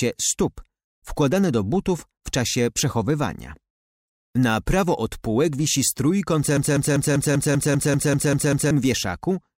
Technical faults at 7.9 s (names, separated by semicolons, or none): broken-record loop